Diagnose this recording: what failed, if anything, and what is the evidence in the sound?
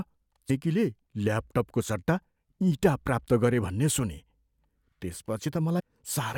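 Codec stage: compressed frames skipped. The speech jumps ahead at 0.49 s and again at 5.78 to 5.81 s. Each time roughly a third of a second goes missing, about ten 23.2 ms frames.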